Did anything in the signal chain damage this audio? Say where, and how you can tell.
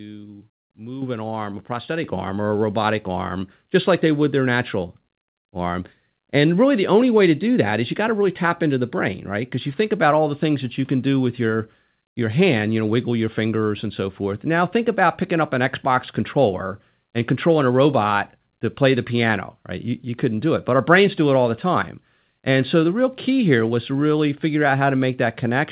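Yes, the microphone volume stepped up twice, at the call-processing stage. At 1.02 s, just before "an arm a", voice and room tone jump together by about 9 dB. At 2.04 s, between "an arm a" and "arm or a robotic", there's another jump of about 6 dB. Everything rises at once with a clean, instant edge, so it's the call software's gain control raising the device's input volume, not the talker getting louder. The missing top end above 4 kHz is just the narrowband call codec.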